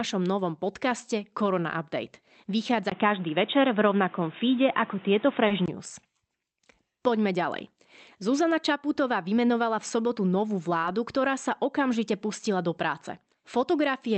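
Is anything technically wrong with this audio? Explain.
Yes, two faults are audible in this speech clip.

From 2.90 s to 5.68 s the sound changes character in a way that points to an input switched to a poorer device, likely a different microphone or a headset's call profile. There is a gap of about 20 ms at the switch. Afterwards nothing comes through above 3.8 kHz, so the speech sounds narrowed and boxy. The level shifts by roughly 5 dB, and a new noise floor sits about 30 dB below the speech. All of this reflects the replacement device's own band limit, gain and self-noise.

At 5.47 s to 5.53 s there is a short stall from a late packet. A packet missed its playout time and the jitter buffer ran dry. The receiver covered the gap by extending the preceding sound for about 30 ms, then resumed where it left off once the data arrived. No audio is lost, but one sound is held unnaturally long and playback runs about 30 ms later from that point on.

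The call path runs through Opus at a rate that fits 32 kbps, with the codec's band extending to 8 kHz.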